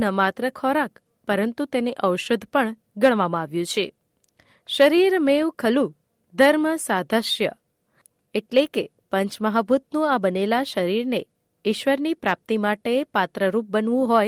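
No technical faults are audible.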